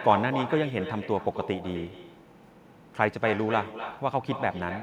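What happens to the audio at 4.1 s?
At 4.1 s the speech is shadowed by echo with no canceller, present across the whole clip. The far end's loudspeaker feeds its microphone and nothing removes it, so a thinner copy returns roughly 300 ms later, about 10 dB below the direct speech.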